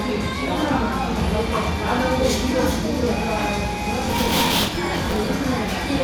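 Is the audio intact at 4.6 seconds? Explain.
No. At 4.6 seconds the sound is torn by processor overload crackle, running from 4.06 to 5.27 s. The processor keeps missing its deadlines, and each late buffer is filled with old audio. The pattern fits buffers of around 10 ms. The hard-edged repeats pile up into gritty crackling.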